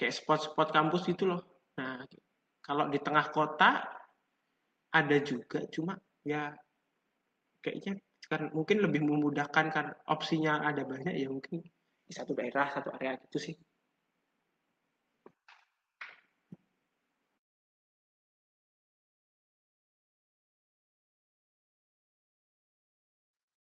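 No technical faults can be heard anywhere in the speech recording. There is no moment in the audio that stands out as a problem.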